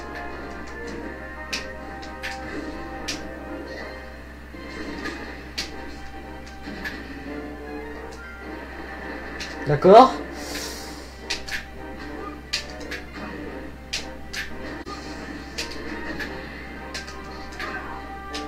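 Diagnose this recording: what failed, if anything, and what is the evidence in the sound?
AAC frame loss with muting at 14.82 to 14.88 s, in the codec stage. The sound briefly dips out and back in, a gap pointing to one lost frame of about 43 ms. The decoder zeroed that frame's spectrum, and overlapping windows faded the audio down and up.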